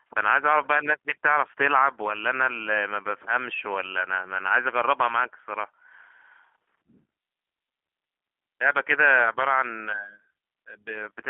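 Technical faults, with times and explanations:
Throughout: G.729 codec. The speech is confined to a telephone band of roughly 250 Hz to 3.4 kHz, so it sounds thin and boxy with no air or sibilant detail above that. The roughness and slightly synthetic, buzzy texture fit a G.729A encode at 8 kbit/s, which resynthesises each 10 ms frame from a vocal-tract filter, a pitch predictor and a sparse pulse excitation rather than sending the waveform itself. The coding damage is plainly audible.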